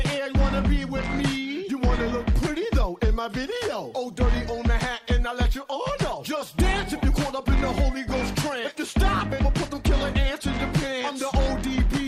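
Nothing goes wrong anywhere in this one; there's no technical fault to point to at any moment in the audio.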